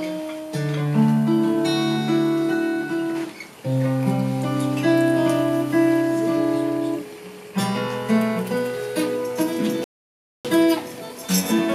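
At 9.84 s the sound cuts out mid-flow and the output stays silent for about 0.61 s, returning at 10.45 s. This is a playback stall, likely caused by the player running short of buffered data or having its audio thread blocked until it recovered.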